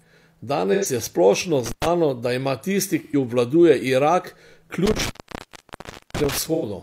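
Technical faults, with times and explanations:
0.73 s, 3.04 s and 6.54 s: AAC frame loss with concealment. Each time about 85 ms of sound turns smeared, which fits two lost 1024-sample frames at 24 kHz. The decoder refills the gap from the last good spectrum, so the sound stays blurred but never goes silent. The first comes just before "je splošno".
1.66–1.86 s and 4.86–6.38 s: intermittent contact. The sound drops out for about 106 ms right after "je splošno", and for about 1.05 s later on, with crackle at each break and faint hiss during the gap. A loose connection opening this way leaves a hard cut, unlike the smeared fill of concealment.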